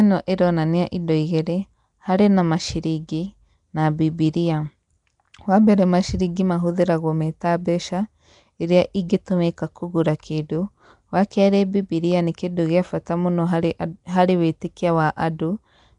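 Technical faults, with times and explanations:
Throughout, Nellymoser compression: The speech has a rough, hissy halo and a smeared, underwater quality, and the codec damage is plainly audible. Nothing sounds above about 10.6 kHz. The likely cause is Flash's Nellymoser Asao codec, at a rate that fits about 44 kbps. It codes short blocks with a fixed, small bit budget. Quiet bands get no bits and are filled with noise. That causes the hiss and the blurring.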